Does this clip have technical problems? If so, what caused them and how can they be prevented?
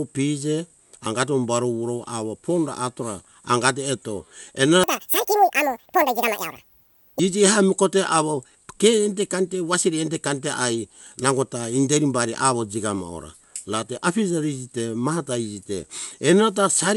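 Yes. From 4.84 to 7.19 s, wrong sample rate makes the speech run twice as fast and an octave (12 semitones) higher. This fits 24 kHz audio played at 48 kHz without conversion. To prevent it, resample to the output rate or set playback to the recorded rate.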